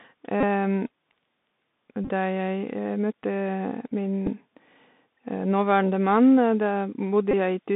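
The headset link runs through the Bluetooth CVSD headset codec for the whole clip. That coder tracks the waveform one bit at a time with an adapting step, and the line passes only about 150 Hz to 3.7 kHz. The speech therefore sounds narrow and telephone-like, with a granular hiss beneath it, scratchy sibilants, and clear slope distortion on loud, bright moments.

Against that, lost voice packets are covered by a Bluetooth headset packet repeated fault, where the chip decodes the previous packet again. At 0.41 to 0.44 s about 22.5 ms is lost, which fits roughly six packets, and the 3.75 ms repeat turns it into a short buzz near 267 Hz. At 2.04 to 2.10 s, 33.8 ms of losses are scattered over 45 ms, with the longest run about 20 ms, giving a broken, stuttering buzz. At 4.26 to 4.28 s only 7.5 ms goes, heard as a brief rough tick. At 6.30 to 6.33 s, 15 ms is lost across 30 ms in short bursts of around 7 ms, and at 7.31 to 7.33 s an 18.8 ms run brings the buzz back briefly.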